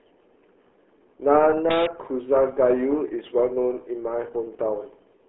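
Speech carrying RealAudio 14.4 codec damage throughout: heavily muffled and gargly, in a way that fits an 8 kbit/s dial-up codec. A spectrogram shows energy confined to roughly 300 Hz to 3.4 kHz, a hard ceiling near 3.9 kHz, and smeared, blotchy harmonics.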